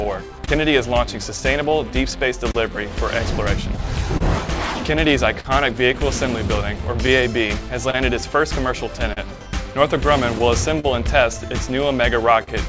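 Small timing hiccups keep recurring at uneven intervals through the whole clip, where tiny slices of sound are dropped or repeated and the flow briefly stumbles. This is clock drift between sender and receiver: the sender's clock runs roughly 2% slow, so the jitter buffer keeps draining and the receiver keeps stretching or patching short pieces to stay in step. Separately, from 0.04 s to 12.49 s there are around fifteen brief ticks and smears, the longest about 40 ms, adding up to roughly 0.3 s. These scattered short gaps come from lost or late packets on a G.722 call path that carries nothing above 8 kHz, each hole filled by continuing the preceding sound.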